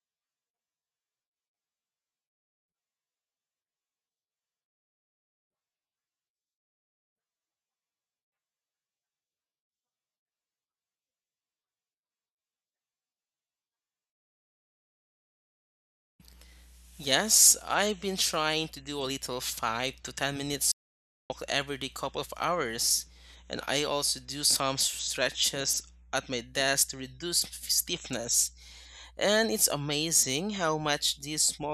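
A speech recording with an audio dropout to silence from 20.72 to 21.30 s: the sound cuts off abruptly mid-flow and returns on "every day couple of", with roughly 0.58 s of material gone. Unlike a natural pause or a noise gate closing, the gap holds plain silence with no room tone or fade at either edge, most likely because the input was briefly lost while the recorder kept writing zeros.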